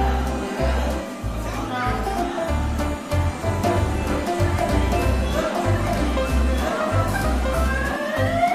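From 3.67 s to 7.97 s there is a doubled audio track, likely because the same signal was captured a second time through a slower path or an edit left two copies out of step. A full-band duplicate runs around a second and a half behind the original and at roughly the same level, so everything is heard twice in overlap. The copy carries no decay or room colour, and it cuts in and out abruptly at those times.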